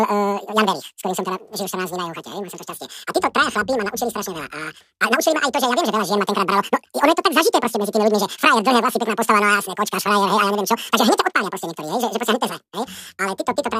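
From start to finish the speech plays at twice its proper speed and a full octave (12 semitones) high, the sign of audio read two samples at a time. The reader treated each pair of samples as a single frame, as if the stream held two channels or wider samples, so the voice rushes by with a chipmunk pitch. A spectrogram shows harmonics and formants shifted up an octave and squeezed in time, while the waveform's cycles are half their natural length.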